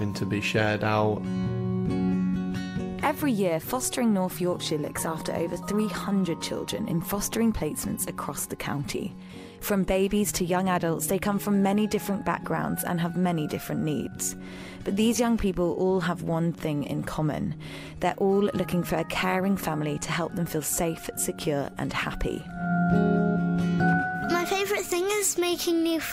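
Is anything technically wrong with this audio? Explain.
No, nothing technically wrong can be heard in this audio. The sound carries on steadily throughout, with no problem to point to at any moment.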